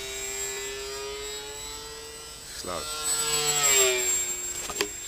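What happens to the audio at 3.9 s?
Nothing goes wrong at 3.9 s: the audio plays through that moment intact, with no dropout, click or other fault.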